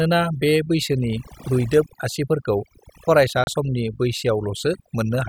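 Overdone noise removal runs through the whole speech clip. Aggressive suppression leaves a lowered background with twinkling specks. From 3.44 to 3.48 s there is a digital broadcast dropout. The receiver muted on bad data, leaving a brief hole that fits one lost frame of about 32 ms.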